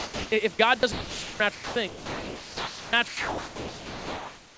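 At 0.00 to 0.32 s, 0.80 to 0.83 s, 0.92 to 1.40 s, 1.55 to 1.76 s, 1.88 to 2.93 s and 3.08 s to the end, the speech gives way to a flat, steady hiss. This is likely sound dropped by the voice detector. It mistook part of the speech for background and stopped sending. Comfort noise fills each gap.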